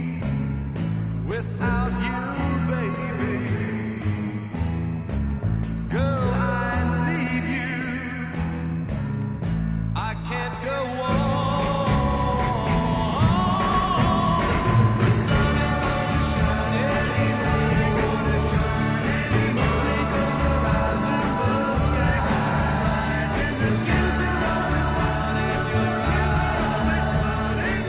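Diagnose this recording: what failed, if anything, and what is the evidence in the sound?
Nothing in the recording failed, and no stage of the chain shows a fault. The call path is audible as a band limit with nothing above 4 kHz, which fits a narrowband telephone codec such as G.711 mu-law at 64 kbps.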